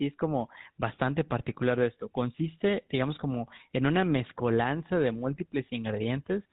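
Speech, and the whole thing has been through the GSM full-rate codec, the original mobile-phone voice coder, with the damage plainly audible from start to finish. That codec models the vocal tract and drives it with a coarse, regularly spaced pulse train, which gives the voice its gravelly, buzzy edge. Nothing above 4 kHz survives, so it sounds boxed-in and dull. The roughness fits the 13 kbps rate.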